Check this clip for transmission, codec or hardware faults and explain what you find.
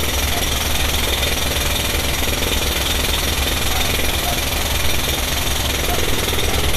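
One fault is present, and it runs through the whole clip. Throughout, the treble sounds hissy and grainy, tones are roughened and attacks are blurred, and nothing is heard above 14.2 kHz. This is likely Vorbis compression at a low bitrate, which fits about 37 kbps. The encoder quantises the residue above the spectral floor so coarsely that fine high-frequency detail turns into noise of similar energy.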